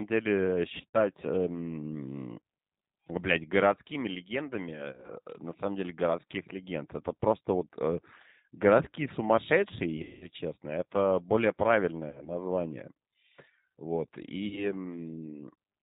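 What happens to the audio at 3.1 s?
At 3.1 s the speech carries G.729 codec damage, as it does for the whole clip, not just that moment. The sound has a plainly audible rough, synthetic edge. It is dull, with no content above 4 kHz. The coder rebuilds each 10 ms frame from a vocal tract filter, a pitch predictor and a few pulses, so fine detail is lost. The heavy reduction fits a low rate of about 8 kbit/s.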